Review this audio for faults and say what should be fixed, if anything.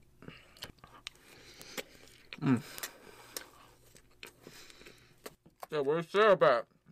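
Bit error spikes tick at 1.62, 2.78 and 6.16 s, peaking at about -18, -12 and -24 dBFS. Flipped bits make jumps of one to three samples. Add error checking to storage and links.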